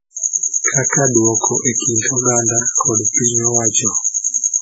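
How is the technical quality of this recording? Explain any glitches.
The technical quality is poor, with one fault running through the whole clip.

Throughout the speech, everything above about 7.7 kHz is missing, leaving it dull and band-limited, with a swirly, watery texture. This is likely low-bitrate audio saved at a high bitrate: a very low-rate MP3 pass, fitting something near 16 kbit/s, stripped detail that re-encoding at a much higher rate cannot restore. On a spectrogram, a hard flat ceiling at 7.7 kHz appears, with smeared, blocky patches below it.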